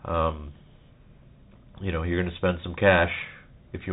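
From start to finish the speech carries the sound of a Bluetooth CVSD headset codec. The band stops at about 3.8 kHz, so everything sounds muffled and telephone-like. CVSD codes each sample as a single up-or-down bit, which fits a 64 kbps stream. Here the adaptive step size cannot keep pace with loud, fast-changing high content, so the damage is plainly audible: sibilants come out scratchy and a grainy hiss sits beneath the speech.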